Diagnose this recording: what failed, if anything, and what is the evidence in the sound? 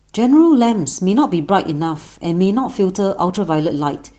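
The fault is a lost packet rebuilt from error correction, at the network stage. From 3.27 to 3.37 s the speech turns briefly rougher and noisier, with no gap. About 60 ms was rebuilt from the low-bitrate copies the next packets carried, which fits three lost packets.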